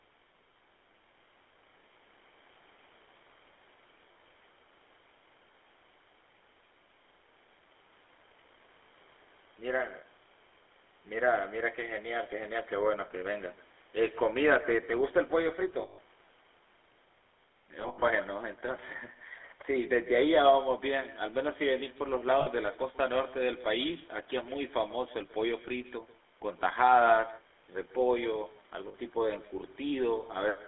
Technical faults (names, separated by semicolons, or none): echo with no canceller; GSM full-rate codec; lost GSM frames